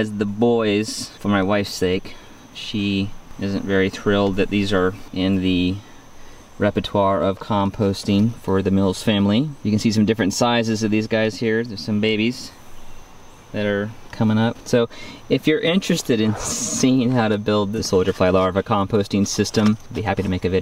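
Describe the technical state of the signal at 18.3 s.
At 18.3 s the signal is intact, with no dropout, distortion or other fault to be heard at that moment.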